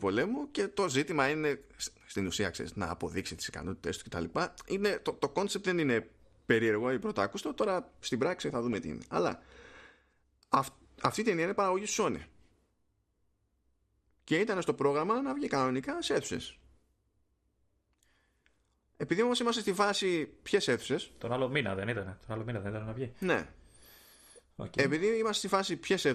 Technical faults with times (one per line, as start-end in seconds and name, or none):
0.00-26.15 MP2 compression
4.00-4.34 DAB burbling
6.00-6.02 DAB burbling
8.50-8.78 DAB burbling
10.99-11.12 DAB burbling